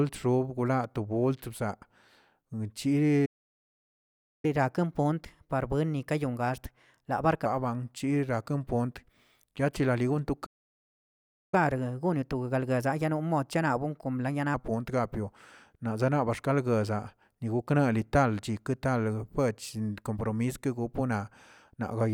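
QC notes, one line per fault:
3.25–4.45 s and 10.46–11.54 s, playback stall: the speech halts mid-flow into silence for about 1.18 s, then after "yachiralili gonto" for about 1.07 s. The player was likely starved of data.
4.45–7.45 s and 11.54–14.54 s, catch-up at higher speed: straight after each stall the speech runs 1.15 times fast for 3 s, with pitch raised about two semitones. The player is resampling its backlog to win back lost time. A steady speed error would persist instead.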